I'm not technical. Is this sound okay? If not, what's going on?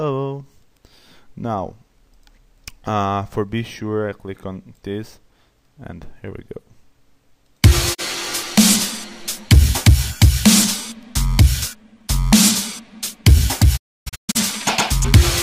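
No, there are two spots where it drops out. That's a digital broadcast dropout: the receiver lost good signal and went quiet until it recovered. There's a brief cut near 7.93 s, then several short gaps between 13.76 and 14.37 s. That audio is gone.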